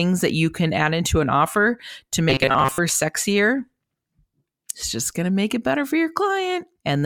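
From 2.30 to 2.80 s, just after "into an offer to", the speech turns into a rigid metallic buzz near 134 Hz that only loosely tracks the words. This is robotic sound from repeated short buffers, likely caused by audio arriving too seldom, so a roughly 7.5 ms chunk was replayed for around 70 percent of that stretch while the real audio was skipped.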